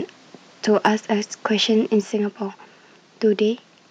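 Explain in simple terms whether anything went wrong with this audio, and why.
From about 0.76 to 0.88 s the speech turns harsh and crackly on its loudest moment. That's microphone overload. The sound pushes past the loudest level the microphone's converter can handle, so the tops of those peaks get sliced flat. Only a small share of the sound is cut off, but that's enough to give it a rough, fuzzy edge. The likely cause is the mic input being set a bit too high.

Then at 2.01 s the whole thing, voice and background together, suddenly drops to a quieter level and stays there. That's the microphone volume stepped down. It sounds like the call software heard the earlier loud, distorted peak and turned the mic input down in one go rather than easing it. The likely reason is that it was trying to stop more overload.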